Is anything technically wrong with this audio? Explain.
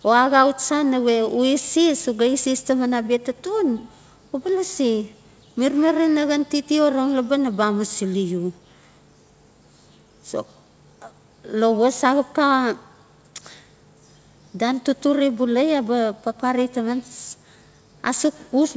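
No, nothing stood out on listening to this speech, which has the normal sound of a call, with no content above 8 kHz.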